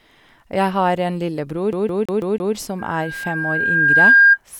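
From 1.73 to 2.55 s the speech skips like a CD stuck on one turn. A 164 ms slice repeats five times, each jump briefly muted.

At 2.79 s loudspeaker feedback squeal begins. A 1.6 kHz tone swells over roughly a second and a half. It ends up about 15 dB above the speech before stopping at 4.38 s.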